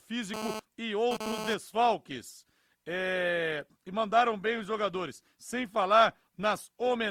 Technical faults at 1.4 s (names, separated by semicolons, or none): GSM phone buzz